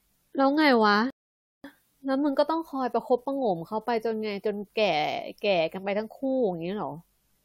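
At 1.10 s the player hits a rebuffering stall: its store of downloaded audio runs dry, so playback halts until the network delivers more. The speech drops abruptly into silence, and at 1.64 s it picks up again at exactly the point where it broke off. No part of the speech is lost. About 0.54 s of dead air is simply inserted, which lengthens the clip and leaves an unnatural gap in the flow.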